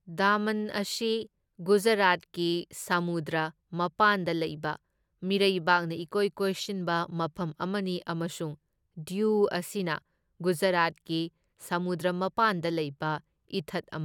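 No technical faults can be heard in the signal at any point.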